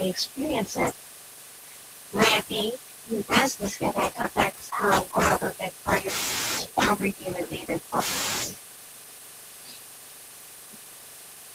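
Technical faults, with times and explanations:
4.13–4.73 s, repeated packet loss (robotic sound): over this stretch of speech, several brief holes, the longest about 15 ms, open in quick succession. About 53 ms is patched by stretching the preceding sound forward, and about 40 ms more is simply missing, leaving a choppy texture with pieces missing. On a waveform, short repeated cycles alternate with small dropouts. A spectrogram shows thin vertical seams where harmonics freeze briefly and then jump.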